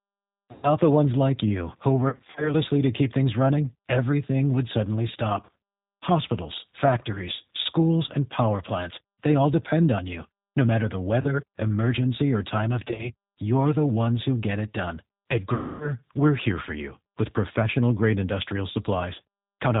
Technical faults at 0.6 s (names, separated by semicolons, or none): G.729 codec; VoIP packet loss concealed by the speech codec